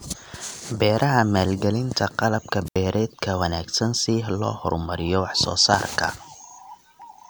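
At 2.65 s a brief hiss rises, then about 75 ms of near silence before speech returns at 2.77 s: a wireless microphone squelch dropout, the receiver muting a fading radio signal.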